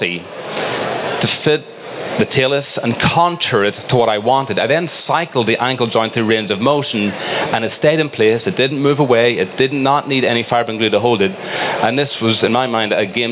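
Gain pumping runs through the whole clip, with a level swing of about 25 dB. Loud and quiet passages sit squashed close together. The likely cause is input gain set far too high, with a fast limiter clamping each peak. A noise gate would cut the gaps to silence instead of raising the background in them. The audio is band-limited to 4 kHz, which fits a G.711 mu-law call path at 64 kbps.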